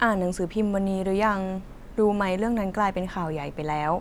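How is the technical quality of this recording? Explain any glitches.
The recording has no technical faults. Nothing in the speech needs explaining.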